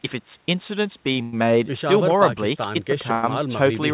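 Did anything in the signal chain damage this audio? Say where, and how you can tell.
Yes. At the network and jitter buffer there's a short stall from a late packet at 1.13 to 1.16 s. The sound holds for 23 ms with a slight buzz or dip, then carries on with nothing lost.

There are two call audio freezes, at 1.22 to 1.34 s and 3.13 to 3.24 s, each about 100 ms of stretched, fading buzz or hiss. They likely come from delayed packets draining the jitter buffer. The audio then resumes where it stopped, under the 4 kHz ceiling of the telephone codec.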